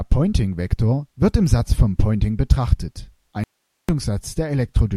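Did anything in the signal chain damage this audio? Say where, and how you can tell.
Yes. At 3.44 s the speech drops out abruptly, leaving only hiss about 55 dB below the signal for roughly 450 ms, until it snaps back at 3.89 s. Because the path after the break stayed live and carried hiss rather than digital silence, this audio dropout to a faint residue is likely a momentary break in the analogue wiring or connection upstream of the converter. On the waveform the envelope collapses to a thin noise band with sharp edges. On the spectrogram the speech harmonics vanish, leaving a faint, uniform hiss floor.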